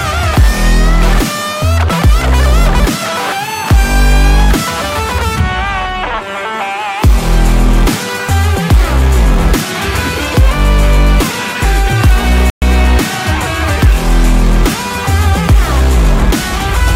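At 12.50 s there is a playback stall, most likely the player running short of data or its output thread being held up. The sound cuts to silence mid-flow for 120 ms, until 12.62 s, leaving an abrupt gap before the audio picks up again.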